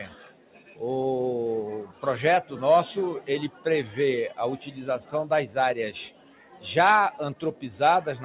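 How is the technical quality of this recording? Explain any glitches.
The recording has audible level pumping from a speech noise suppressor acting on non-speech sound. It comes through a narrowband call path: nothing is present above 4 kHz, which fits G.711 mu-law at 64 kbps.

Throughout the clip, a noise suppressor applied to music or sounds keeps mistaking steady tones and tails for noise and pulling them down, with swings of around 10 dB. Attacks pass while held portions sink, so the sound pumps and thins. Unlike dropouts, the level dips rather than vanishing.

The sound was cut by the noise suppressor at 0.08–0.81 s (about 11 dB), 1.85–2.03 s (about 9 dB), 3.49–3.66 s (about 10 dB), 6.1–6.65 s (about 11 dB) and 7.35–7.63 s (about 10 dB). Sustained or decaying parts are ducked and their decays shortened. Unlike a gate, it never goes fully silent.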